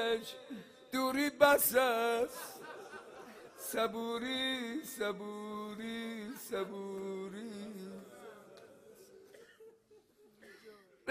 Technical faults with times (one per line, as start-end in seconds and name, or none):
none